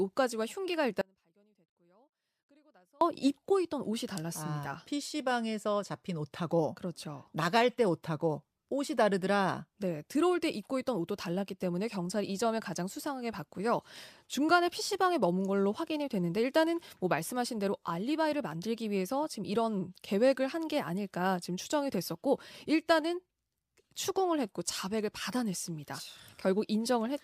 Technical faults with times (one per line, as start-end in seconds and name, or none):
1.01-3.01 audio dropout to a faint residue